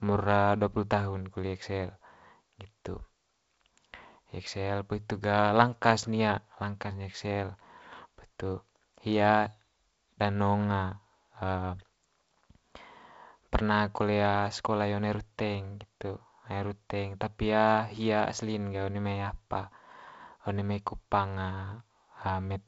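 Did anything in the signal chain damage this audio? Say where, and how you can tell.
No, nothing in the signal chain stood out as damaging the audio on listening, and the speech simply has the character of G.722 wideband telephone coding, with nothing above about 7.7 kHz.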